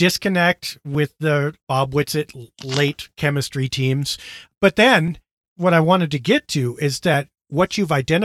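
Speech with a regular click about every 2.06 s, from 0.95 s to 7.14 s, likely clock drift buffer slips, where a few-hundred-ppm clock mismatch drops or repeats a few dozen samples.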